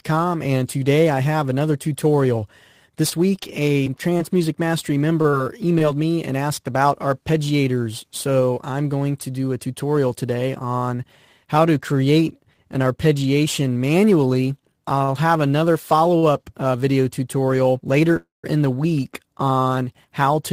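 From 3.09 to 5.82 s, scattered short gaps appear: around ten lost or late packets, each patched by continuing the previous sound. The longest is roughly 30 ms, and about 120 ms of audio is missing. On a spectrogram they show as brief smeared or repeated vertical slices.

Short stalls from a late packet follow at 14.98 s (22 ms), 15.04 s (37 ms) and 16.18 s (43 ms). Each time, the jitter buffer emptied and the last sound was stretched until the packet arrived. Nothing is lost, but the sound is held too long. On the waveform these look like short, flat-textured extensions, and on a spectrogram like horizontal smears.

At 18.16 to 18.46 s there is a call audio freeze, likely from packets held up in transit. The last sound is continued for 272 ms, including about 170 ms of silence, then resumes where it stopped. It shows as a fading tail followed by a blank gap.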